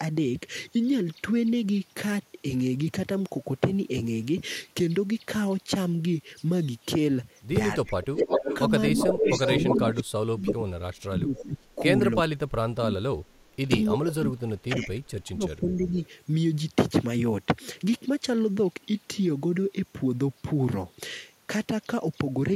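A speech recording over a call link, where the echo canceller likely could not tell its own talker from loudspeaker echo while both sides spoke, so speech suppressed in double talk turns the voice down at 7.75–8.5 s, 8.93–11.81 s and 12.15–15.96 s, dipping by about 25 dB at first and about 35 dB later. The same canceller also likely let loudspeaker pickup through. That echo leak returns a copy delayed 333 ms at 8.03–8.58 s, 8.97–10.03 s, 10.47–10.53 s, 11.36–11.75 s and 15.84–16.08 s, as loud as the speech at first and fading to much quieter.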